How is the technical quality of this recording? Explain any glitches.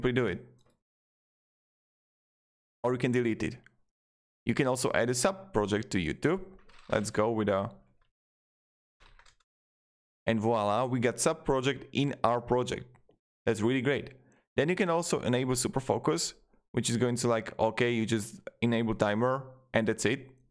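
No glitches turn up anywhere in the recording. Nothing disrupts the audio at any point.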